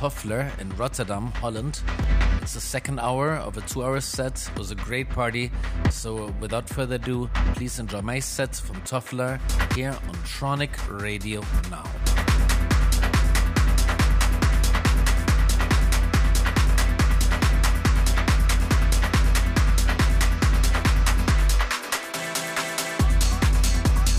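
At 2.03 s the audio drops out for about 2.9 ms, a block of digital silence. The sound cuts out straight to silence and straight back, so both edges are abrupt and the gap is heard as a single sharp tick, not a hole. A short dropout like this fits a 128-sample buffer that the program did not fill in time. Unlike a fade-out or concealed packet loss, there is no softening or smeared fill, just silence between two hard edges.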